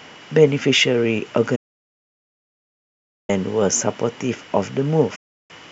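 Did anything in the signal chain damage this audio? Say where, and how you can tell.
Yes, there's a digital broadcast dropout at the reception and decoding stage, where the speech mutes twice: from 1.55 to 3.30 s and again from 5.15 to 5.51 s. Each hole opens and closes with a very quick fade, around 8 ms, rather than a hard click. That's the receiver muting when frames go missing or fail their checksum. Both gaps are whole multiples of 24 ms, which fits a stream of 24 ms frames, and whatever was sent during them is simply gone.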